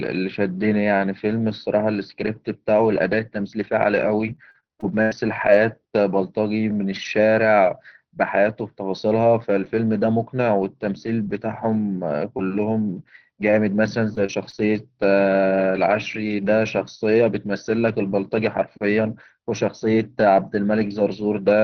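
Speech carried over an Opus call link with a top end stopping around 6 kHz, and it has two kinds of trouble. There are short lost packets rebuilt from error correction at 3.97, 13.45 and 13.51 s. Each is a 20 ms patch from the lower-quality backup copy, so there's no gap, just a brief rougher, noisier grain. Worse is the repeated packet loss (robotic sound) from 4.35 to 5.49 s and again from 14.09 to 14.60 s. Back-to-back holes get filled by stretching the last sound, which gives a choppy stutter with bits missing.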